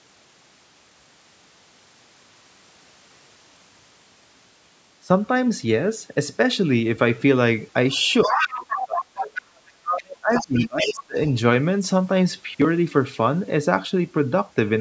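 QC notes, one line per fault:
7.92–9.59 s and 10.32–11.03 s, other side's voice leaking through: the echo canceller likely failed to fully cancel the loudspeaker signal picked up by the microphone. A second voice can be heard under the speech, strongest in the first stretch at only a few dB below it and weaker in the second at around 10 dB down. Because the canceller removes only part of the echo, that voice comes through as a partial copy alongside the main talker.
8.01–9.44 s and 9.79–11.17 s, speech suppressed in double talk: the echo canceller likely could not tell the near talker from the loudspeaker echo while both were active. It then attenuated everything, including the wanted speech. In each stretch, about a second of the talker's speech drops sharply, by around 25 dB in the first and 30 dB in the second. This makes the speech dip.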